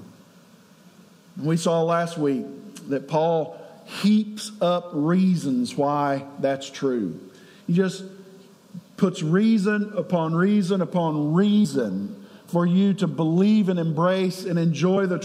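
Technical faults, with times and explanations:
11.61–11.66 s and 14.93–14.97 s: damaged data in a compressed stream. Corrupted bytes in the encoded data make the decoder misread or reject the affected frames and hunt for the next valid header, producing two brief disruptions of roughly 40 ms each.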